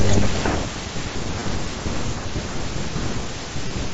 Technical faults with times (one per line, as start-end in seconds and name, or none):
1.40 concealed Bluetooth headset packet loss
3.68-3.70 concealed Bluetooth headset packet loss